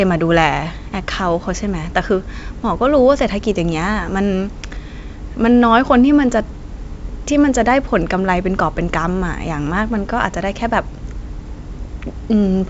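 No technical faults can be heard in the speech.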